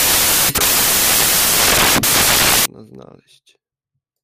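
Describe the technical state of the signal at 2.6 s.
At 2.6 s the signal is still corrupted by samples built from the wrong bytes, a fault running from the start of the clip to about 2.66 s. The reader assembles each sample from misaligned or swapped bytes. The rapidly changing low-order bits end up as the most significant part of each value. It is heard as loud, harsh broadband noise.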